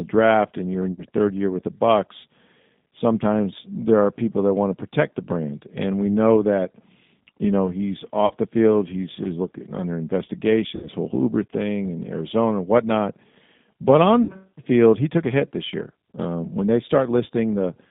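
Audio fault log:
throughout: G.729 codec. The speech is squeezed into a telephone band of roughly 150 Hz to 3.7 kHz and rebuilt at 8 kbit/s from a vocal-tract filter, a pitch predictor and a few sparse pulses per frame, not from the waveform itself. That model-based resynthesis is why the damage is plainly audible: the speech stays intelligible, but it sounds rough and slightly synthetic, with no air or sibilant brightness above the cutoff.
0.92–1.05 s, 8.26–8.34 s, 10.76–10.88 s, 14.23–14.43 s: VoIP packet loss concealed by the speech codec. Gaps of 60, 40, 60 and 60 ms fall between "draft and you're in" and "third year with the", after "know he's" before "the field", and before "field he took a". The decoder extends its last pitch and filter with falling gain, producing a brief fading buzz or coloured noise, and the speech stays weak for a moment after packets resume.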